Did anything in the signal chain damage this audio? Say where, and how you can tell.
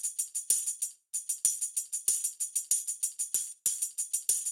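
Yes. Lost LE Audio frames at 2.13 to 2.15 s, in the Bluetooth link: a roughly 20 ms gap, consistent with two 10 ms LC3 frames, is filled with a brief noisy smear. The decoder repeats the last spectrum with randomised signs.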